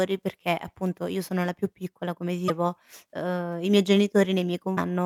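At 2.46–2.50 s and 4.74–4.78 s, damaged data in the compressed stream makes the decoder misread frames and resync, producing a brief chirp, squawk, click or short hole in the speech.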